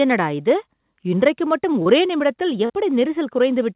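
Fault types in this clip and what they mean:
Short concealed packet loss: two brief smears, at 1.82 s and 2.65 s, where 40 ms of audio never arrived and was rebuilt from the preceding sound.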